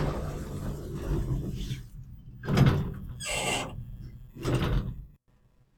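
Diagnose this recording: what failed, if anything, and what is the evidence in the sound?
Nothing stood out on listening; no stage in the chain left any audible failure in these sounds.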